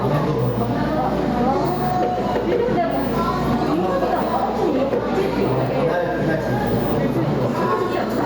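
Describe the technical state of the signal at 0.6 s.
At 0.6 s the signal shows gain pumping, which runs through the whole clip rather than being confined to this moment. The gain swings by roughly 10 dB, so loud and soft passages sit unnaturally close together and the sound is squashed. The likely cause is input gain set far too high, with a fast limiter or compressor clamping each peak.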